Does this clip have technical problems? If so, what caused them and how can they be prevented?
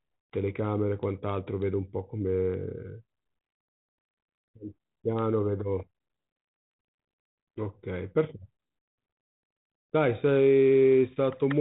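No, there are no technical faults to point to in this speech clip. It has passed through G.726 ADPCM at 32 kbit/s, which leaves a light coding texture and nothing above 3.9 kHz, as expected for that telephone codec.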